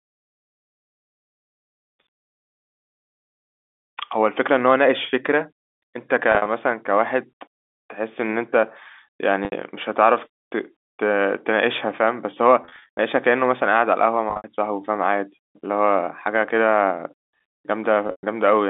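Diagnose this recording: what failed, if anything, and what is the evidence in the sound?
Packet loss with pitch repetition in the network: packets dropped at 6.32–6.46, 9.45–9.52, 12.63–12.99, 14.30–14.44 and 18.07–18.23 s, and the receiver looped the last pitch period across each gap. Short gaps sound like a brief buzzy hold. The 120 ms run at 18.07 s fades to silence before speech cross-fades back.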